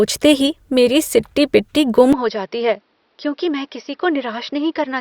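Input switched to a poorer device at 2.13 s in this speech clip: with no gap, the sound turns duller and about 10 dB quieter, nothing above 5.8 kHz survives, and a faint new noise floor appears, likely because recording moved to a narrower-band microphone.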